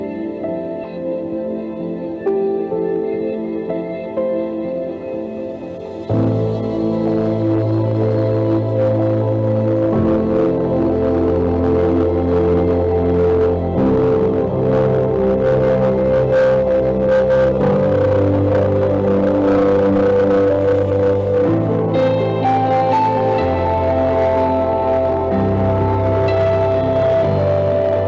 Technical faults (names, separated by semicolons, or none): hard clipping; skip ahead